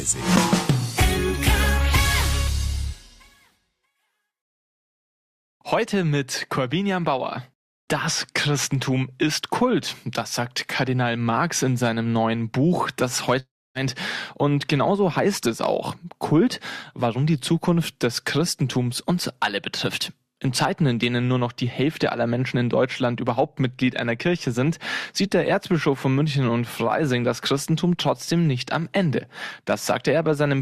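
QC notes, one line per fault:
13.39–13.78 s: long network dropout. The preceding sound smears into a fading buzz, then drops to silence for about 0.27 s before resuming, with roughly 0.36 s of material lost. This is likely concealment stretching the last received audio across missing packets.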